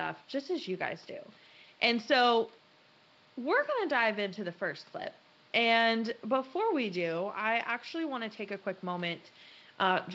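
Nothing technically wrong can be heard in this speech recording. Room noise sits about 31 dB below the speech, and the band limit near 7 kHz fits G.722 wideband telephone coding at 64 kbit/s.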